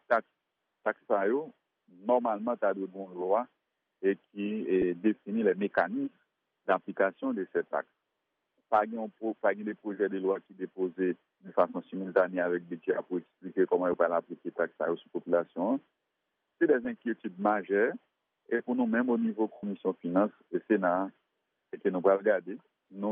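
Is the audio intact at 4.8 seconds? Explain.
No. At 4.82 s there is a brief, rough blip where the sound turns momentarily grainy and hashed, a small noisy smear rather than a clean dropout. The cause is lost LE Audio frames: about 10 ms of the Bluetooth LE Audio stream never arrived, which fits a single lost LC3 frame. The decoder filled the gap by reusing the previous frame's spectrum with randomised signs, so the concealment sounds like noise rather than silence.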